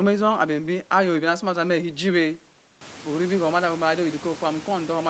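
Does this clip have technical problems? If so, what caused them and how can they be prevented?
No, the signal shows no technical fault: nothing is present above 8 kHz, which fits a wideband call path, and the room's background noise rises by about 16 dB at around 3 s but stays about 20 dB below the speech.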